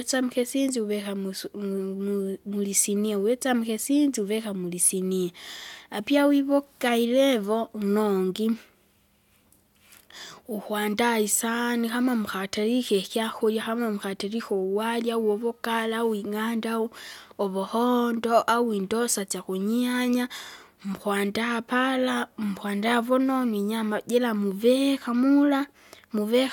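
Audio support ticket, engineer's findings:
No audible faults found on listening; speech playback shows nothing to attribute to any component, no fix required.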